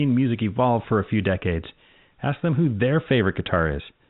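No technical faults are audible.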